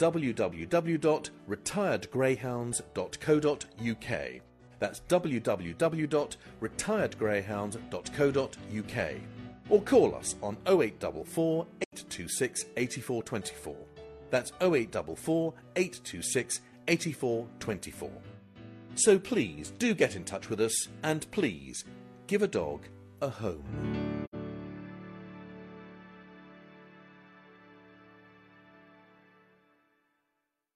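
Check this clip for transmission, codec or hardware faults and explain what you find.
The clip has one codec fault, AAC frame loss with muting, heard twice. The first gap runs from 11.84 to 11.93 s. The second runs from 24.24 to 24.35 s. Each hole lasts about 85 ms, which fits two lost AAC frames. The decoder had nothing to play, so it filled that span with zero spectrum. The overlapping windows ease the sound out and back in. Each gap is a soft-edged dip to silence.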